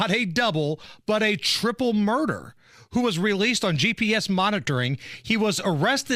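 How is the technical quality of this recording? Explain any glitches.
The recording has two audible glitches, both from a corrupt frame decoded. In both, damaged compressed frames were decoded anyway, misplacing energy in frequency. From 0.81 to 0.86 s, between "a double" and "but a triple murder", a couple of frames produce a faint chirp. From 3.74 to 3.82 s, after "who was released on", several frames give a much louder noisy burst.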